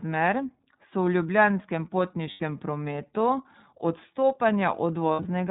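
iLBC codec damage runs through the whole speech clip. Nothing above 4 kHz survives, and because each 30 ms frame's excitation is coded on its own, the voice carries a plainly audible rough, slightly synthetic edge. The dull, band-limited tone and this level of damage fit iLBC's 13.33 kbps mode.

Lost iLBC frames occur from 2.30 to 2.40 s. About 90 ms of audio is missing, which points to three consecutive 30 ms frames. The decoder fills the hole by repeating the last pitch cycle blended with noise, so the gap sounds like a briefly held, faintly buzzy vowel. The voice returns almost immediately afterwards.

Lost iLBC frames return from 5.13 to 5.26 s. This time about 90 ms of loss is scattered across roughly 180 ms, with the longest run around 70 ms. The concealment cuts in and out, giving short breathy, buzzy holds interleaved with decoded speech. Each recovery is instant, since no iLBC frame depends on the one before it.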